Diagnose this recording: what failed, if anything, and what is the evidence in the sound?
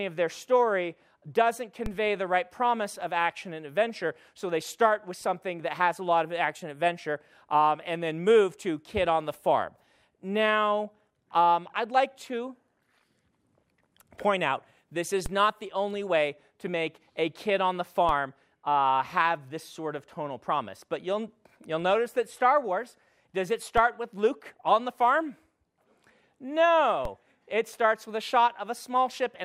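A DC step at the converter or analogue input stage: low thumps at 1.86, 15.26, 18.09, 23.78 and 27.05 s, each a jump in the zero line of about -20 to -22 dBFS, then decaying as a 20 Hz high-pass drains it. Unlike a dropout or digital click, the sound continues unbroken underneath.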